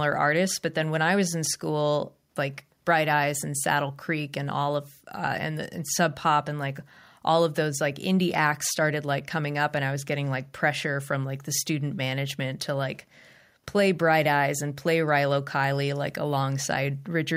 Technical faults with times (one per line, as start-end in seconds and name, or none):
none